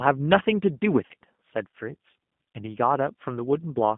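Throughout, the speech carries G.729 codec damage: a rough, slightly synthetic tone, band-limited to about 150 Hz to 3.5 kHz, which fits an 8 kbit/s G.729A stream rebuilding speech from a filter and pulses.

From 1.06 to 1.14 s, VoIP packet loss concealed by the speech codec drops 40 ms of audio, which fits two lost packets. The decoder stretches the last sound into a fading buzzy tone or coloured noise rather than silence or a click, and the speech stays weak or distorted briefly afterwards.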